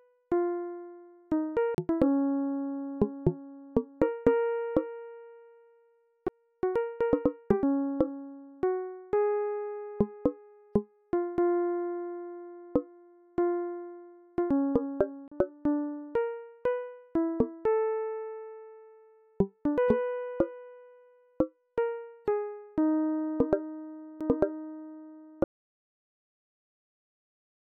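At 1.75 to 1.78 s, 6.28 s, 15.28 to 15.32 s and 24.20 s the audio shows a CD skip: the laser has jumped to a different turn of the disc's spiral, so the player briefly mutes and resumes elsewhere in the material. Each is a short tick with a near-silent gap, roughly 40 ms at the first and third, only a few milliseconds at the second and fourth, followed by an abrupt discontinuity where the sound picks up out of sequence.

From 25.44 s to the end the signal collapses into an audio dropout to silence. The sound cuts off mid-flow and what follows is silence, with no room tone or noise floor underneath. This points to the input being lost while recording continued, likely a disconnected device, a failed link or an accidental mute, so whatever was playing during that stretch is not present.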